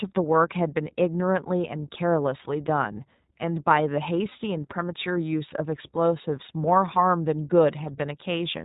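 The whole clip has passed through the iLBC codec, a narrowband VoIP coder that codes the excitation of each short frame on its own, and the result fits its 15.2 kbps mode with 20 ms frames. Everything above 4 kHz is gone, so the speech sounds boxed-in and telephone-like, and the coding damage is plainly audible as a rough, slightly synthetic texture on the voice for the full length.

From 4.30 to 4.33 s there are lost iLBC frames: a single packet went missing, which fits one 20 ms frame, and the decoder filled the hole by repeating the last pitch cycle blended with noise. This is heard as a very brief held, faintly buzzy vowel-like sound in place of the missing audio. Because each iLBC frame is self-contained, the speech snaps back to normal immediately afterwards.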